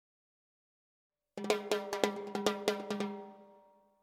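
Nothing is technically wrong with the audio in this clip.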